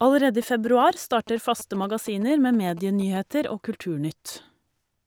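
GSM signalling bursts run from 0.42 s to 3.17 s, sitting roughly 20 dB below the speech. A 2G phone close to the recording chain is sending short clusters of radio bursts while it signals to the network, and some part of the audio circuit rectifies that RF into audible energy. The result is a galloping dit-dit-dit of brief buzzes pulsing at about 217 Hz underneath the speech.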